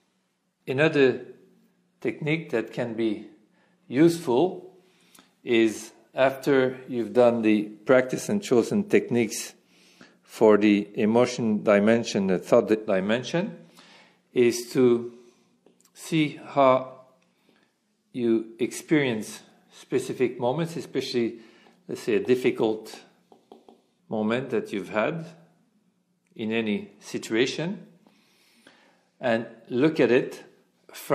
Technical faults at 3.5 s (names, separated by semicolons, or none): none